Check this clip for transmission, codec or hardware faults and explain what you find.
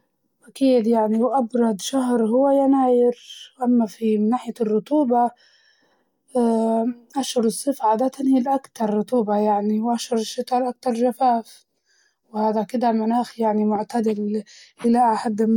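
No faults detected.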